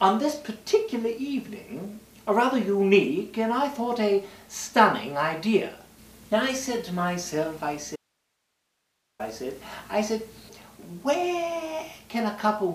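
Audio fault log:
7.96–9.19 s, audio dropout to a faint residue: the sound cuts out abruptly for 1.23 s, leaving hiss about 50 dB down, likely a break upstream with the later path still live. Waveform: a hard-edged flat band. Spectrogram: a sharp gap of faint broadband noise.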